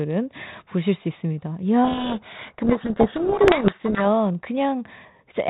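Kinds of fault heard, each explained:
Codec payload misread: from 1.84 to 4.06 s the speech sinks under harsh, grating distortion, then the light 32 kbit/s G.726 sound returns. The receiver reads each G.726 code word with its bits in the wrong order, so the decoder rebuilds wrong sample differences.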